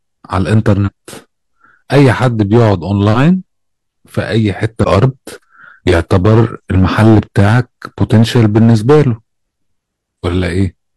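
Hard clipping runs through the whole recording. The speech was driven roughly 10 dB past what some stage could pass, so the loudest peaks got sliced flat. That's only around one sample in twenty, but the squared-off tops throw harmonics high up the spectrum, so you hear a gritty crackle riding on the stronger syllables instead of clean transients. It never lets up, because the overload hits every loud moment.

Then there are two spots of damaged data in a compressed stream, first at 0.83 to 0.89 s and again at 4.80 to 4.85 s. Part of the encoded data there was corrupted, so the decoder misread those frames, lost its footing and had to hunt for the next valid frame header. Each one comes through as a short glitch, roughly 50 to 60 ms long, cutting across the speech.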